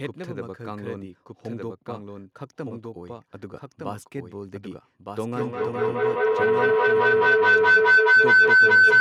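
Throughout, a doubled audio track trails the speech by about a second at roughly 5 dB lower, clean and dry, likely from a second, slower capture path. From 5.37 s to 9.0 s, feedback howl builds as a speaker-to-microphone loop gains level each trip, narrowing to about 1.5 kHz, pulsing roughly every 200 ms and peaking about 17 dB above the speech.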